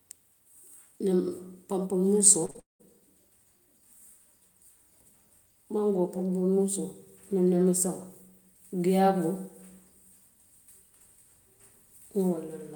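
From 2.45 to 2.86 s there is repeated packet loss, with a robotic sound. Audio went missing again and again. Each hole was patched by stretching the last sound, for about 284 ms in all. The longest gap is 199 ms. The speech sounds choppy.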